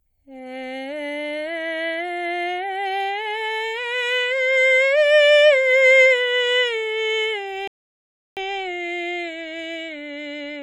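A music clip interrupted by a rebuffering stall: at 7.68 s the sound drops to silence for 0.69 s, then resumes at 8.37 s exactly where it stopped. Unlike a dropout, nothing is skipped. The player simply ran out of downloaded audio and waited.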